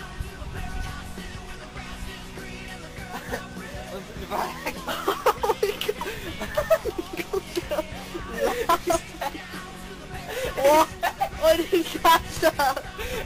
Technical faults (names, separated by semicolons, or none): none